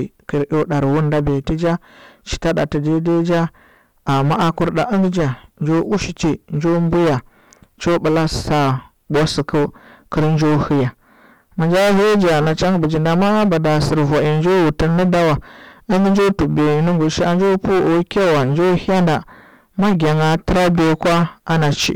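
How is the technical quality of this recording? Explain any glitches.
The technical quality is poor: the speech is heavily distorted by hard clipping from start to finish. The signal is driven about 23 dB past what one stage can pass, so nearly a third of the waveform is sliced flat at the limit. Those squared-off peaks add harsh upper harmonics, giving every loud syllable a constant gritty fuzz rather than occasional crackle.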